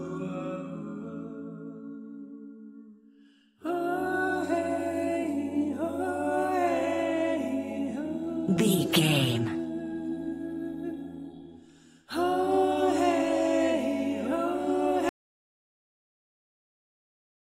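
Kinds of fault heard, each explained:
Audio dropout to silence: at 15.09 s the sound cuts off mid-flow and never returns, leaving about 2.4 s of silence to the end with no room tone underneath. The likely cause is a lost input, such as a disconnected device, failed link or accidental mute, while recording carried on writing zeros. On the waveform the trace snaps to a flat line; the spectrogram goes dark across all frequencies from that point.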